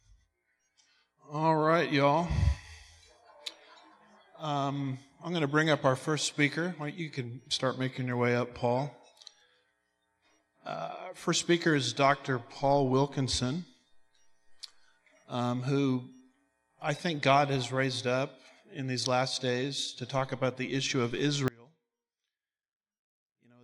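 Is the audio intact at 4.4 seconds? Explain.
Yes, the audio is intact at 4.4 seconds, with no dropout, click or distortion at that point.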